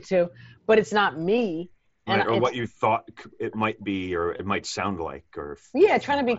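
A short run of Bluetooth headset packets went missing in this speech clip, and the phone's concealed Bluetooth headset packet loss repair refilled the 4.37 to 4.39 s gap, about 22 ms, by repeating recent waveform. The result is a brief buzzy hold, with a slight warble as real audio resumes, over the light graininess of the mSBC wideband link.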